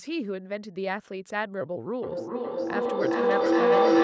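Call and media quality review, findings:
Feedback howl from 2.03 s to the end of the clip. Tone near 500 Hz builds to about 10 dB above speech level, with repeats roughly every 0.4 s. Probable cause: two endpoints in one room sharing the call, so each mic-to-speaker pass adds gain and the loop settles on its favoured frequency. Call microphone processing is audible as a band limit with nothing above 8 kHz.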